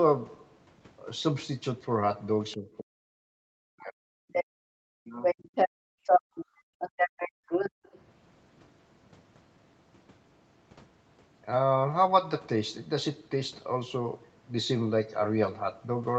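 From 2.55 to 4.09 s the speech sinks by roughly 40 dB and breaks up, likely speech suppressed in double talk, with the echo canceller turning down the talker while the far end also spoke. At 4.32 to 4.45 s a second voice briefly cuts in at about the same level as the talker. This is likely the other side's voice leaking through, far-end audio from the loudspeaker that the canceller failed to remove. Right after, from 4.45 to 4.68 s, the room sound drops away by about 32 dB for a fifth of a second. That is background gated by the echo canceller, the microphone clamped hard while the loudspeaker played. The talker dips again from 4.96 to 5.28 s, likely the same double-talk suppression. From 5.23 to 8.01 s the far-end voice likely leaks through for a longer stretch, again near the talker's level. Between 5.69 and 7.83 s the background gates out by about 32 dB, for around a second in total.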